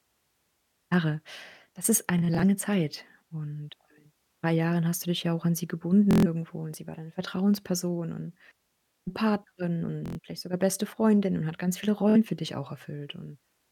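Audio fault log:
2.18–2.43 s Bluetooth stutter. About 93 ms of sound is lost in short gaps spread over about 230 ms. No gap is longer than about 23 ms. The receiver replays its last slice each time, giving a quick buzz.
6.11–6.27 s Bluetooth stutter, between "ja auch an sie" and "und sie war deine". About 139 ms drops out. A repeated slice fills the hole.
10.06–10.19 s Bluetooth stutter, just before "vielleicht sogar beste". About 116 ms goes missing and is heard as a machine-gun stutter. The speech then resumes further on.
12.10–12.16 s Bluetooth stutter, between "und hat ganz viele" and "für dich auch". About 46 ms is lost, heard as a brief repeat.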